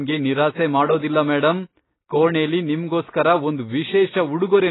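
Heavy AAC compression throughout this speech, likely at a very low bitrate near 16 kbps, strips everything above 3.9 kHz, leaving it dull, smeared and warbly.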